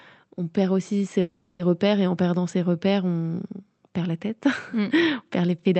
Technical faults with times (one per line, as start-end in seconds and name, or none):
1.21-1.61 call audio freeze